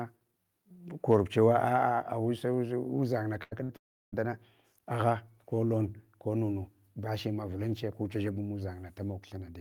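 At 3.43 s the speech smears into a short held sound that fades until 3.53 s, then picks up slightly further on. It happens again from 3.63 to 3.71 s. Each is a burst of packet loss: about 80 ms and then 60 ms of audio never arrived, and the receiver stretched and faded the last sound to cover each gap.

From 3.77 to 4.14 s a brief fading tail gives way to roughly a third of a second of silence. The audio then resumes with about 360 ms missing, most likely a long network dropout.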